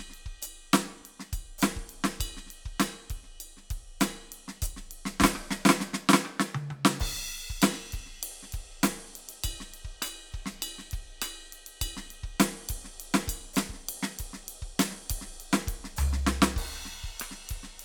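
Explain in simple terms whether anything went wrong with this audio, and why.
Listening to this music, nothing stood out as having gone wrong with the audio.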